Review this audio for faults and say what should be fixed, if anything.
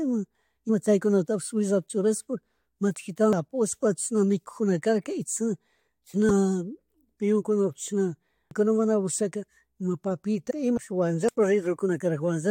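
Damaged data in a compressed stream produces short glitches at 0.68 s, 6.29 s, 10.50 to 10.52 s and 11.88 s. The decoder misreads corrupted frames, loses sync and resumes at the next frame header. Verifying stream integrity with checksums and reliable transport, and keeping metadata out of the audio payload, would prevent it.

Dropped buffers (overrun) cause a sudden jump in the speech at 3.33 s, 8.51 s, 10.77 s and 11.29 s. Roughly 0.15 s, 0.3 s, 0.3 s and a tenth of a second go missing, likely because the capture program fell behind the hardware. There is no silent gap and no chirp, only a hard splice. Giving capture a larger buffer or higher scheduling priority would prevent it.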